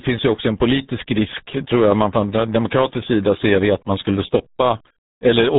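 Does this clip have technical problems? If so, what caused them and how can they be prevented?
Yes. The whole clip carries heavy RealAudio 14.4 codec damage: the speech sounds muffled and gargly, with nothing above about 3.8 kHz, which fits a low-rate dial-up codec around 8 kbit/s discarding detail to squeeze through. To prevent it, encode at a modern codec and a higher bitrate.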